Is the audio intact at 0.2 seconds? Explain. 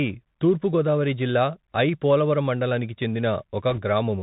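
No. At 0.2 s the Bluetooth CVSD headset codec is at work, as it is throughout the speech. It codes one bit per sample, stepping up or down by an adaptive amount. Nothing above 4 kHz passes, s sounds turn scratchy, and granular hiss sits underneath.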